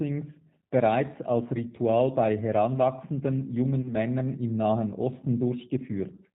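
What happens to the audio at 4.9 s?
At 4.9 s the speech carries the G.729 codec damage present across the whole clip: a roughness that fits an 8 kbit/s coder. It rebuilds the voice from a vocal tract filter, pitch predictor and sparse pulses. Unlike a simple low-pass filter, it adds a buzzy, synthetic texture and cuts everything above 4 kHz.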